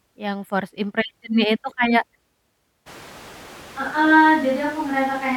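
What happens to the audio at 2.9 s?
At 2.88 s the speech abruptly turns roomy and hollow, with thinner bass and background noise rising to roughly 20 dB below the speech. The level stays about the same, and this continues to the end. It is likely a switch to a distant microphone.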